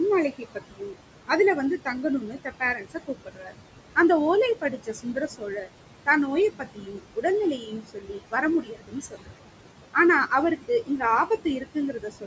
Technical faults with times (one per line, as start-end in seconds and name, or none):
0.00-12.26 noise suppressor artifacts
0.31-0.96 speech cut by the noise suppressor
1.78-3.58 speech cut by the noise suppressor
4.55-5.68 speech cut by the noise suppressor
6.50-7.25 speech cut by the noise suppressor
7.58-9.47 speech cut by the noise suppressor
10.28-12.26 speech cut by the noise suppressor